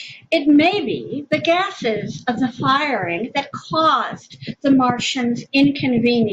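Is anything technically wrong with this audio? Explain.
No, nothing technically wrong turns up anywhere in this speech recording.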